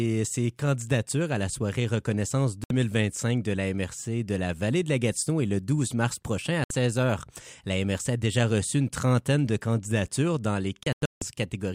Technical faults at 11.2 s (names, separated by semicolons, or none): digital broadcast dropout